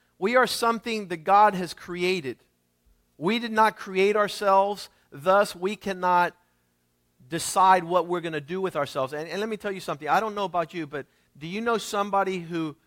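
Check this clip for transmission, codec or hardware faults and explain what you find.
The speech signal holds steady throughout, with no dropouts, distortion or interruptions anywhere in the recording.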